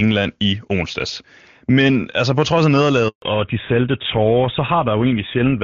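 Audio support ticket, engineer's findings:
Handover gap at 3.08 to 3.22 s, 140 ms, just after "altså på trods af". Speech dies away within tens of milliseconds, then full silence. Probable component: network handover. No speech frames arrived during the switch. Speech in that span is lost.

Fallback to narrowband from 3.22 s to the end. Nothing above 4 kHz. Speech turns duller and rougher. Before the gap the wide band fits HD Voice near its top rate. After it, the sound points to an older narrowband codec such as GSM full rate.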